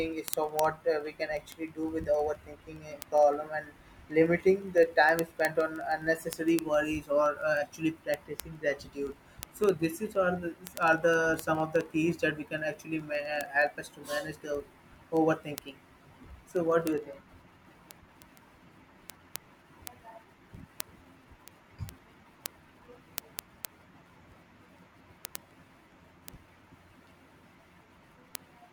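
From 0.13 s right through to 28.71 s there's a steady run of word clock ticks, roughly every 50 ms, hundreds of them under the speech. The receiver's clock is off by a few hundred ppm, so a single sample gets dropped or doubled at each slip.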